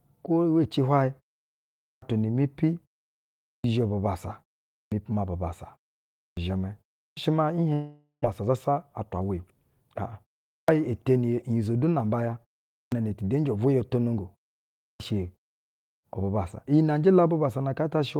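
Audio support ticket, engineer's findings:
Clipped start after a pause, eight onsets: 1.91, 3.54, 4.81, 6.26, 7.07, 10.58, 12.82, 14.89 s. Each loses roughly 100 to 110 ms of initial sound after pauses of 0.3 to 0.8 s. Output device sleeping in silence, late wake/relock. Waveform: flat line, then abrupt onset, no rise.
Spectrogram: onset columns start hard-edged, missing leading energy.

Long network dropout, 7.73 to 8.26 s. About 400 ms of audio never delivered. Receiver concealment extends the last sound as a fading buzz for about 0.51 s, then roughly 120 ms near-silence before resumption. Likely cause: network loss burst, with playout delay shifting around 100 ms.
Spectrogram: smeared, repeating harmonic texture decaying to dark band.

Jitter buffer speed-up, 8.42 to 9.30 s. Audio runs about 8% fast at unchanged pitch, sounds hurried. Buffer overfull; roughly 70 ms trimmed via repeated removal of pitch-period chunks.
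Spectrogram: harmonics steady, syllable spacing compressed. Waveform: periods subtly spliced, no gaps.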